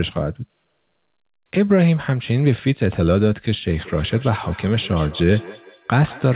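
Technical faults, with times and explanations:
3.83 to 6.35 s, feedback echo between two devices: speech comes round again roughly every 200 ms, at most about 21 dB below the original. A second device in the room replays the call, and the first device's microphone picks it up and sends it back, past an echo canceller that only removes what its own device plays.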